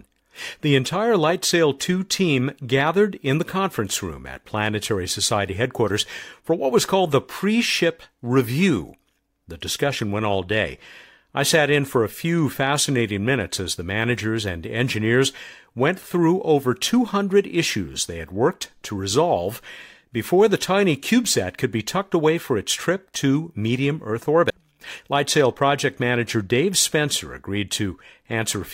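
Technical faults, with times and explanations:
24.50 s, CD skip: the speech cuts out for only about 4 ms with a small tick, then resumes from a different place on the disc because the laser has jumped to another turn of the spiral, after a knock or a surface flaw. Unlike a plain dropout or a digital click, the gap itself is tiny, but the speech after it does not continue where it left off. It lurches abruptly forward or back.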